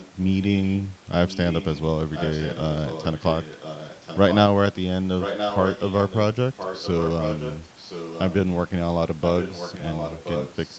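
An echo leak runs through the speech in seven stretches: 0.0 to 0.81 s, 1.28 to 1.8 s, 2.13 to 4.37 s, 5.2 to 6.19 s, 6.57 to 7.59 s, 7.79 to 8.36 s and 9.21 to 10.78 s. A fainter copy of the talker trails the original by 1.02 s, most likely sound from the far end's loudspeaker that its echo canceller failed to remove. The copy is quiet in some stretches and almost as loud as the speech around 5.2 to 6.2 s. Unlike room reverberation, which smears each sound, this is a distinct, late repeat that comes and goes.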